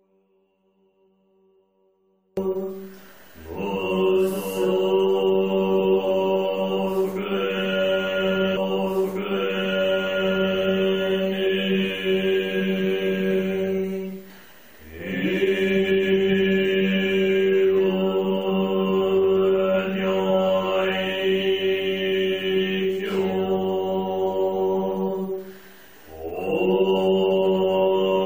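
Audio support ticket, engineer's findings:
Audio dropout to a faint residue, 0 to 2.37 s: already in progress when the clip opens, just a faint leak of the sound roughly 40 dB under normal, then an abrupt snap back in at 2.37 s. Likely a lost feed upstream with the downstream path still live and passing the residue.

Stream segment repeated, 8.56 to 10.55 s: about 2.0 s of material plays a second time, with a small blip at the jump back. The player fetched or queued the same chunk twice, adding roughly 2 s to the timeline.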